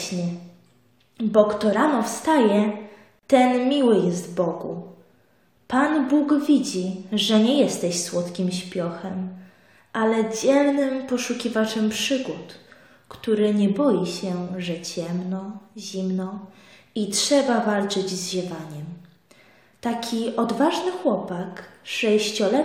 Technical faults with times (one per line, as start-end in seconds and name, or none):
3.19-3.23 gap at a join of encoded pieces